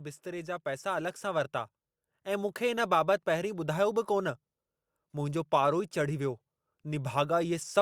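Automatic gain rising runs from 0.23 s to 1.59 s, as the level control in the recording chain judges the incoming speech too quiet and slowly turns its gain up by about 6 dB. The increase is applied to the whole signal, so the voice and the background noise swell together over roughly 1.4 seconds rather than jumping, giving a gradual fade-up feel at the start of the clip.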